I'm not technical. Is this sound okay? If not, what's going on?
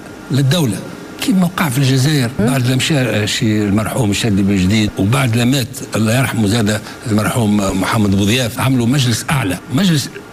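No. At 6.87 to 6.89 seconds there is a loud pop. The likely cause is a sudden jolt of electricity getting into the equipment, the kind that comes from a plug being moved, a switch being flicked, a spark of static, or a brief hiccup in the hardware. That jolt is recorded along with everything else, so you hear a single sharp pop, noticeably louder than the surrounding audio, while the sound continues underneath it.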